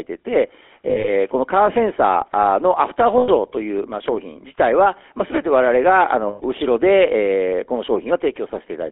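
GSM full-rate codec damage runs through the whole speech clip. The codec models the vocal tract and excites it with a sparse, regularly spaced pulse train, discarding two of every three excitation samples. This leaves a plainly audible buzzy, gravelly roughness on every syllable. The sound sits in a narrow telephone band from 300 Hz to 3.4 kHz, with nothing above it, and the character fits the 13 kbps full-rate GSM codec.

Lost GSM frames break the sound three times. From 0.88 to 1.09 s, about 100 ms goes missing in short gaps scattered over 160 ms, the longest only a few tens of milliseconds. There are further losses of 100 ms from 3.18 to 3.29 s and 120 ms from 6.28 to 6.42 s. Each time, the decoder reuses the last good frame's settings, so the sound freezes into a rough, metallic ring instead of continuing.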